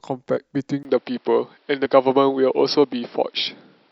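At 0.36 s the speech jumps forward with a brief smeared blip rather than a click. That is compressed frames skipped: about two frames of roughly 26 ms each, some 50 ms of audio, never reached the output, so the overlapping frames on either side were joined directly.

From 0.83 s to the end, after a 20 ms gap, the sound turns duller and boxier. Nothing reaches above 5.6 kHz, the level shifts by a few dB, and a new noise floor sits roughly 40 dB below the speech. The likely cause is the input switching to a poorer device.

At 1.85 s a second compressed-frames skip drops roughly one frame, around 30 ms, leaving another short smeared blip.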